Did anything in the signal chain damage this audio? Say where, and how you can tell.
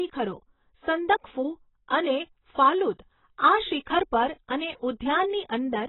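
Yes, at the codec. Throughout, the speech is dull and smeared, with nothing above 3.9 kHz. Likely heavy AAC compression, its cut-off lowered to fit roughly 16 kbps.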